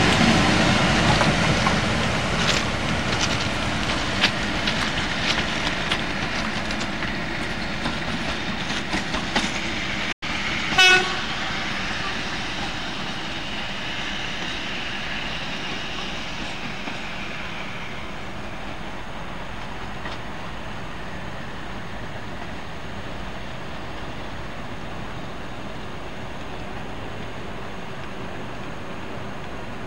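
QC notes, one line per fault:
10.12–10.23 s, digital broadcast dropout: the receiver muted the sound with a quick fade of about 8 ms into clean silence, resuming 96 ms later, a gap that fits three lost frames. Unlike analog fading, no hiss fills it; unlike concealment, nothing is repeated or smeared.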